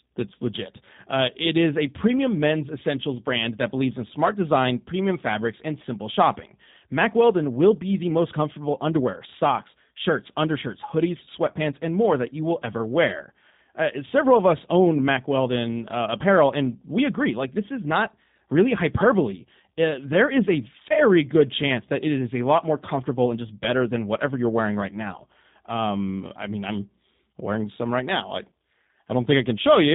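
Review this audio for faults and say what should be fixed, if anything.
G.729 codec damage runs throughout: nothing passes above 3.8 kHz, and speech sounds rough and synthetic from the pulse-based excitation, which fits 8 kbit/s. Use a wideband codec or higher bitrate upstream.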